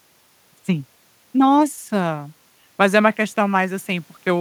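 From 0.0 to 1.5 s the speech is a time-stretched section, sped up twofold with pitch held. It sounds rushed. Software fitting the length is the likely cause.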